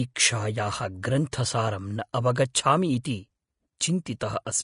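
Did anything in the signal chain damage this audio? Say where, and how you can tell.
Yes, at the codec stage, throughout: likely Vorbis compression, which fits a low bitrate near 35 kbps. Nothing survives above 10.6 kHz, and coarsely quantised treble turns the speech hissy and grainy.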